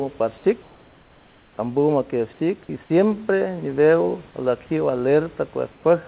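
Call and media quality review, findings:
Comfort noise in place of the background, 0.62–1.58 s. Room background in the pause replaced by flat, featureless hiss about 2 dB quieter, sitting about 34 dB below the loudest parts. Likely DTX at the sender, with the receiver synthesising noise until the sound resumes.

Same fault, 5.72–5.84 s. Brief 120 ms swap to steady noise about 3 dB quieter. Narrowband call path, nothing above 4 kHz, fits a G.711 link.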